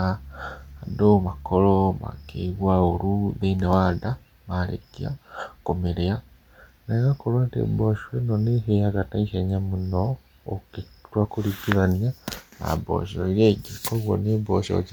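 Bluetooth LC3 compression, heard throughout the speech, is the likely cause of a plainly audible grainy, breathy edge: the transform codec works in 10 ms frames and, at a rate fitting about 48 kbps, thins the upper spectrum and fills gaps with noise, with nothing above 20.2 kHz.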